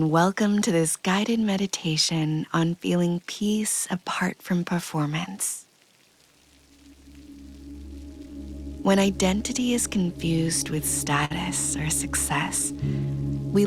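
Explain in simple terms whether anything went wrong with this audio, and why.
A few things went wrong, and they all come from timing. The root problem is clock drift between sender and receiver. The device that sent this audio was running its clock about 3% slower than the one playing it back. So the receiver kept running a little short of audio and had to stretch what it had to avoid falling silent. That steady shortfall drives everything else you hear.

The stretching shows up as repeated timing corrections. From about 0.50 to 10.76 s, the receiver keeps slipping in tiny repeated bits, so the sound plays at roughly 97% of its proper speed. Over that stretch it adds about 0.4 seconds in total. Each fix is small and spaced unevenly, so you'd notice, if at all, a slightly dragging, unsteady pace rather than clear glitches.

At 11.25 to 11.32 s there's a short stall from a late packet. A chunk of audio didn't arrive in time, so the player held the last sound for 54 ms until it turned up, then carried on from the same spot. 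Nothing is actually lost. You just get a brief hang, maybe with a faint buzz or dip.

Right near the end, from 12.71 to 13.12 s, the timing corrections return more sharply, with playback at about 91% speed. Together they add only a small extra sliver, around a twentieth of a second. It's the same drift at work, just a quick catch-up burst that can make the tail feel a touch sluggish.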